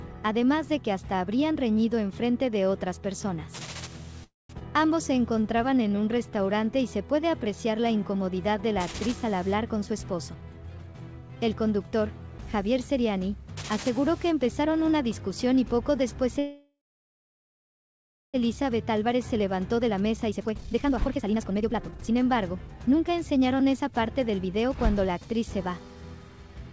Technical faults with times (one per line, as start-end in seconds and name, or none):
4.24-4.51 call audio freeze
4.59-4.63 skip ahead
5.13-6.42 jitter buffer slow-down
9.69-11.37 jitter buffer speed-up
16.39-18.36 call audio freeze
18.74-25.12 jitter buffer speed-up